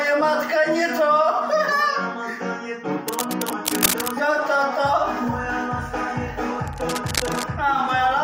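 From 3.08 to 4.11 s, a burst of cable scratch noise sits over the sound: dense, irregular crackle and rustle at roughly 5 dB below the signal, so it is clearly audible. A second, quieter episode runs from 6.67 to 7.44 s, about 10 dB below the signal. The likely cause is a worn lead, connector or control being moved, its contact resistance fluctuating rapidly and injecting ragged noise bursts.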